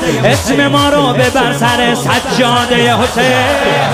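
At 3.08 to 3.10 s, chunks out of order: one 10.67 ms chunk plays a chunk late, leaving a jumbled moment rather than a dropout's gap.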